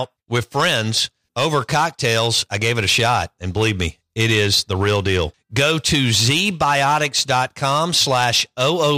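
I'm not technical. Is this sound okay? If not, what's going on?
No. The speech has hard clipping from start to finish. The recording was pushed louder than the equipment could handle, so the tops of the loudest moments were sliced off flat. Only a few percent of the sound reaches that ceiling, but the overload is strong, so every loud syllable comes out with a harsh, gritty fuzz. Unlike muffled or watery damage from heavy compression, this roughness appears only on peaks, while quieter stretches stay clean.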